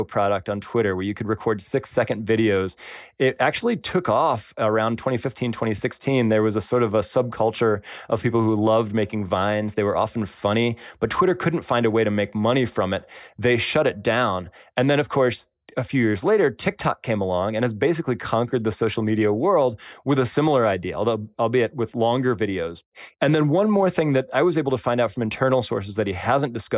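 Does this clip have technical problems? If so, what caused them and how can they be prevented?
No, there are no technical problems to report in this speech clip. Nothing in it calls for a cause to be traced or a fix to be made.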